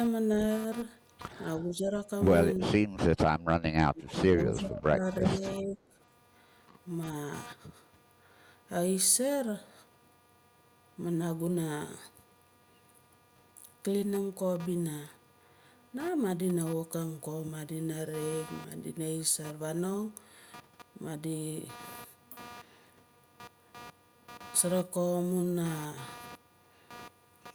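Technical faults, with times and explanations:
Throughout, computer activity noise: a buzzing, scratchy pulse train repeating at around 200 Hz sits roughly 20 dB below the speech. It rises and falls with the computer's workload rather than with the talker. Changing current draw from the processor, graphics card or mouse shifts the ground that the audio circuit shares with them. That ripple rides straight into the signal path, which is why it tracks machine activity instead of the audio.
1.57–2.07 s, 2.58–3.27 s and 3.83–5.98 s, speech suppressed in double talk: the voice sinks in level and thins out in pieces. The first stretch is only a slight dip, the second goes much deeper, and the long third stretch drops by as much as about 25 dB. The likely cause is the far side talking at the same time. The echo canceller could not tell this talker from loudspeaker echo, so it attenuated both together.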